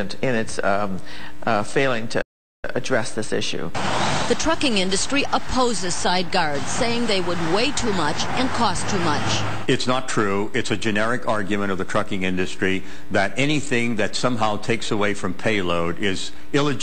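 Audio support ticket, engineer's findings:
Playback stall, 2.21–2.65 s. Output drops to silence mid-flow for roughly 0.41 s, then the sound resumes. Component: player buffer or audio thread. Likely cause: buffer underrun or blocked render thread starving the output until data returned.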